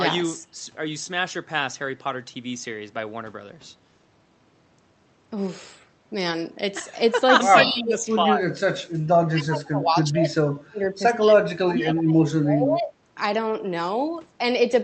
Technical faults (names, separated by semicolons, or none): speech suppressed in double talk